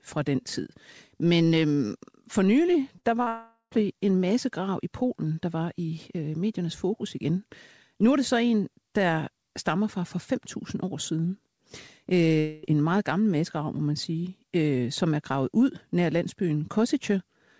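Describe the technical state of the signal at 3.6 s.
At 3.6 s the signal is inside a gap from 3.28 to 3.73 s, likely a long network dropout. The receiver stretches the last speech into a fading buzz, followed by 110 ms of silence. Speech resumes at 3.73 s with 440 ms missing.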